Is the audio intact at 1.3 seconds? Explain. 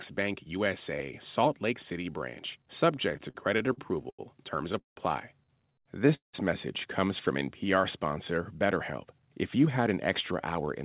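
Yes, the speech at 1.3 seconds is intact: nothing drops out or breaks up there, and all that is audible is the codec's usual coding noise and the telephone-style narrowing of the call path, which leaves nothing above 4 kHz.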